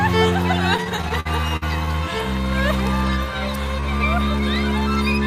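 The audio suffers repeated stalls (stutter) from 0.77 to 1.96 s. Packets arrived late, so the jitter buffer kept running dry. About a dozen brief hold-ups stretch the last sound, the longest 51 ms. Nothing is lost, but the passage drags.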